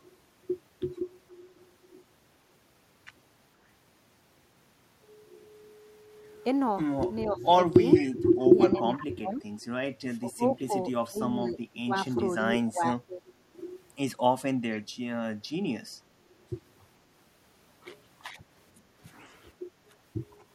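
An echo canceller that likely could not tell its own talker from loudspeaker echo while both sides spoke caused speech suppressed in double talk. It first dips the speech by about 15 dB from 7.27 to 7.59 s. Between 7.94 and 8.31 s, the far end's canceller likely let part of its loudspeaker pickup through. This echo leak returns a copy of the speech about 0.47 s late, some 15 dB down. From 8.39 to 9.46 s, suppression cuts the speech by up to about 30 dB while a second echo scrap sounds at 8.72 to 9.06 s. Further suppression dips of about 20 dB follow at 10.19 to 10.73, 11.07 to 11.94 and 12.45 to 13.21 s. A final brief echo comes at 14.72 to 14.83 s, about 20 dB down.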